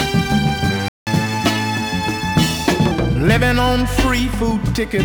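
At 0.88 s the sound cuts to silence for about 185 ms, a playback stall, likely the player running dry of data.

From 1.07 to 2.91 s comes catch-up at higher speed: playback runs 1.1 times fast, pitch rising roughly one and a half semitones, unlike a steady pitch shift.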